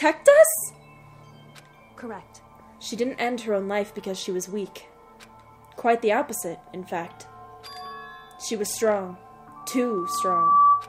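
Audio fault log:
9.56–10.89 s, loudspeaker feedback squeal: a 1.2 kHz tone swells over about a second to roughly 10 dB above the sound. Microphone and loudspeaker form a self-sustaining loop.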